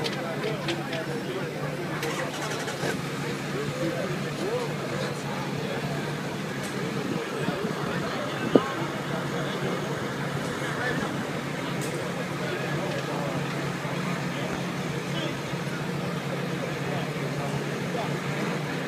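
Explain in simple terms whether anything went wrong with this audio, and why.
At about 14.53 to 14.57 seconds, a sudden jolt of electricity got into the signal, likely from a plug being moved, a switch, a spark of static or a hiccup in the audio hardware. That jolt is heard as a single loud pop, a short sharp crack that jumps out well above the surrounding sound for a split second. The audio keeps going underneath it, and the pop simply sits on top.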